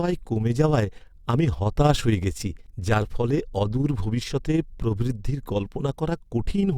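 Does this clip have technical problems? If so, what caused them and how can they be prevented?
Yes. Overlap-add ripple runs through the whole speech clip. The level pulses by about 6 dB around 20 times a second, giving a fast, rough flutter. The audio was split into windowed frames and rejoined with an overlap whose window gains do not add up to a constant. To prevent it, pair the window and hop size so they meet the constant-overlap-add condition, for example a Hann window at 50% overlap.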